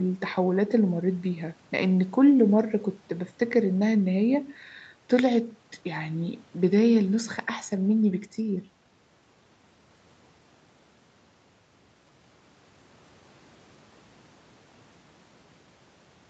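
No technical faults can be heard in this speech. It has passed through a call's microphone processing and an Opus codec path, and the sound stops at about 8 kHz, as expected for that path.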